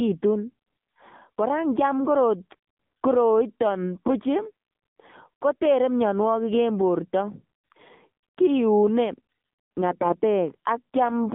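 From start to end the speech passes through an AMR narrowband mobile codec at a low rate, which fits 7.4 kbps. Only about 150 Hz to 3.5 kHz survives, and the pulse-driven vocal model makes the voice plainly buzzy and synthetic, unlike a simple band-limited phone line.

From 9.92 to 10.20 s, AMR bit errors corrupt the frames at a rate of a few percent. Misplaced excitation pulses and skewed gain and spectrum values make the voice hoarse, scratchy and gargly while pitch and level hold steady, with no gaps or repeats as packet loss would cause.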